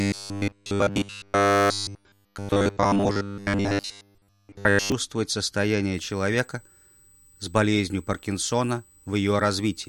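From 0.01 to 4.92 s there's robotic sound from repeated short buffers: a stiff, metallic buzz pinned at 100 Hz, with essentially the whole stretch affected. That's likely playback looping a roughly 10 ms chunk while fresh audio arrived too slowly, so the real material gets skipped.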